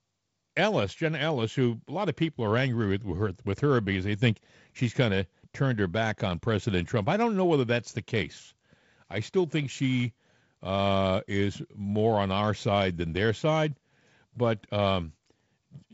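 No technical faults are audible.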